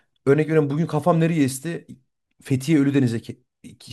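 No technical faults can be heard in this speech.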